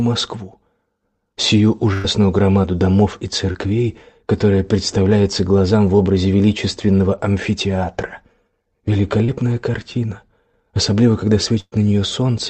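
At 1.93 to 2.20 s, a burst of packet loss drops about 100 ms; the receiver stretches the last sound into a fading hold, then jumps ahead. Brief smears at 3.53 to 3.56 s and 9.24 to 9.30 s are short concealed packet losses of about 20 and 40 ms, blended back into the audio. At 11.60 to 11.74 s, a second burst loses about 120 ms, and its fill fades fully to silence for about 40 ms before the sound resumes. Over the whole clip, the band stops at 8 kHz, which fits a 32 kbps Opus call path.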